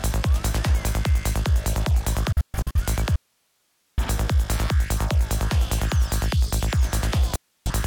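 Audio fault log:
2.32–2.80 s and 7.36–7.70 s, digital broadcast dropout: the sound fades out over about 3 ms and falls silent as the receiver mutes on frames it cannot decode, then returns once good frames arrive. The first event is a cluster of short holes totalling 256 ms spread across roughly 0.43 s, the longest single gap 128 ms. The second loses about 0.3 s. The hole lengths fit runs of lost frames, and whatever was broadcast during those gaps is gone.
3.16–3.98 s, audio dropout to a faint residue: the sound cuts off abruptly for 0.82 s and then resumes mid-flow. Throughout the gap only hiss remains, about 45 dB below the normal level. This is not a pause or a fade. The likely cause is the wanted signal being lost upstream while the path after the break stayed live, so its own noise floor carried on through the gap.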